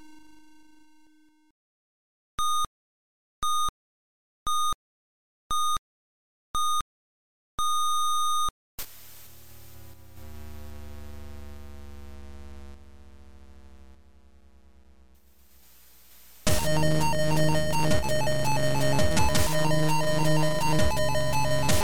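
Two short level dips stand out first. From 9.94 to 10.17 s, and again briefly from 17.99 to 18.04 s, the audio suddenly sinks by about 6 dB and then recovers, which is exactly what you get when one channel drops out of a stereo feed that's being summed to mono: the content both sides share halves, and anything living only on the missing side vanishes. The likely cause is a momentary loss on one leg of the stereo path. Then from 19.17 s to the end there's USB whine, a steady fixed-pitch tone at 1 kHz sitting under the sound, roughly 15 dB down. That 1 kHz pitch matches the 1 ms frame rate of a USB bus, whose current draw is bleeding into the audio through shared power or ground.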